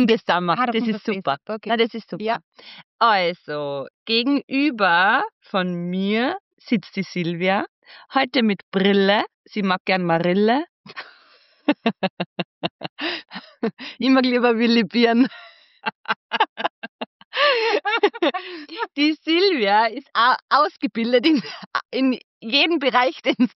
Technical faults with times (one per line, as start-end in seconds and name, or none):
none